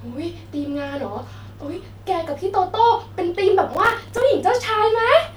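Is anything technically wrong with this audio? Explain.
Yes. Processor overload crackle runs from 3.73 to 4.22 s. The processor falls behind and misses dozens of very short buffer deadlines, about 1.5 ms each. Each miss drops a hard-edged sliver of silence, so the speech turns into a gritty crackle until the load eases.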